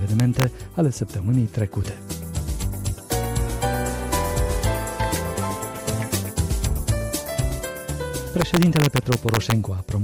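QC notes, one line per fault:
0.20–0.44 s: integer overflow. Peaks sitting right at the limit wrap to the opposite sign, giving sharp cracks.
6.14 s: integer overflow. A brief wrap, heard as a sharp crack.
8.42–9.52 s: integer overflow. About 2 dB of overdrive flips each peak over the limit across the whole range, so the cracks are harsher than clipping.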